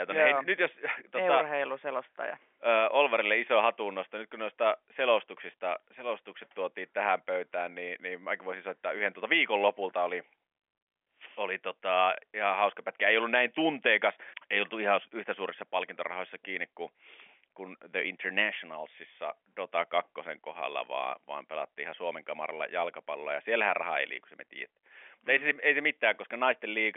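Nothing goes wrong anywhere in this speech recording, which just sits in the narrow band of an ordinary G.711 phone line, roughly 250 Hz to 3.4 kHz, the way any regular call does.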